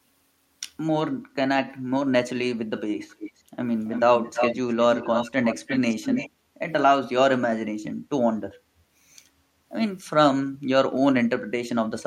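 A far-end echo canceller likely failed to remove what its microphone picked up from the loudspeaker, causing echo leak in this speech: a copy delayed by 332 ms returns at 3.09–3.42, 3.86–4.04, 4.21–5.31 and 5.47–6.3 s, faint at first, then growing fairly strong.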